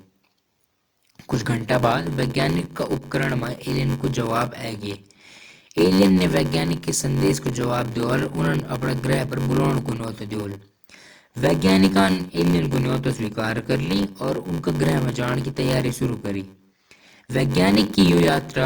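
Throughout, a block size mismatch (padded) inserts zero gaps: 93.8 Hz buzz, fitting 512-sample reads, and speech slowed to 0.861 speed at normal pitch, unlike slow playback.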